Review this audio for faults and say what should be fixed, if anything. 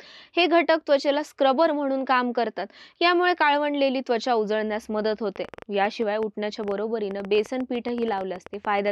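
A train of clicks runs from 5.36 to 8.89 s. About thirty similar pops arrive unevenly, around 9 per second, peaking a few dB above the sound. Likely interference or a faulty connection. Shield cables, move nearby equipment away, and check the interface connection.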